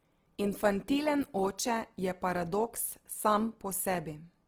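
Plainly audible codec damage runs through the whole speech clip. Its likely cause is Opus compression in CELT music mode, at a rate that sounds near 16 kbps. Band energies survive, but fine detail is folded or noise-filled. Voiced tones turn rough and grainy.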